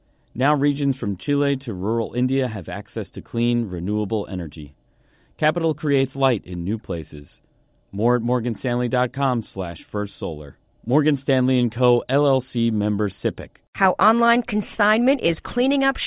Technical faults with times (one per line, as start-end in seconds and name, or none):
none